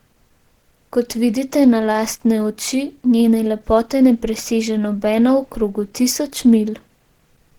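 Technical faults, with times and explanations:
Throughout: Opus compression, likely the cause of plainly audible damage. The speech sounds muffled and hoarse, its upper bands filled with grainy noise rather than left as swirling holes. This fits hybrid mode at around 16 kbps, with nothing above about 20.3 kHz.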